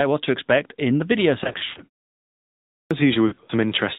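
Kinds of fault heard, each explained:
AMR narrowband mobile codec: Audio is band-limited to 4 kHz with a plainly buzzy, synthetic vocal-tract sound, which fits AMR-NB at about 10.2 kbps.
Lost AMR speech frames: The decoder extrapolates and fades failed frames, giving warbly dropouts after "expect in the video" (1.44–1.80 s, runs up to 120 ms) and at 3.28–3.51 s.
Clipped start after a pause: After a 0.63 s pause, the output path wakes too slowly, swallowing about 0.47 s (2.44–2.91 s), so the sound starts abruptly out of silence.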